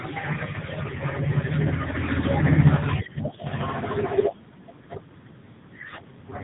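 The speech in this clip passed through the AMR narrowband mobile codec for its whole length, at a low mode whose heavy damage fits roughly 6.7 kbps. The codec samples at 8 kHz and rebuilds the voice from a vocal-tract model fed by sparse pulses in short frames, so nothing above about 3.8 kHz survives. The result is a dull, telephone-band sound that comes across as buzzy and noticeably synthetic throughout.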